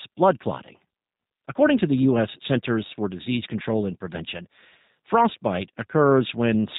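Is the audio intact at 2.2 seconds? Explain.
No. At 2.2 s the speech carries G.729 codec damage, which runs through the whole clip rather than sitting at that moment. The codec rebuilds each 10 ms frame from a vocal tract filter, a pitch predictor and a few pulses per half-frame, which fits an 8 kbit/s low-rate coder. The result is plainly audible: the speech sounds rough and synthetic, and nothing above 4 kHz comes through.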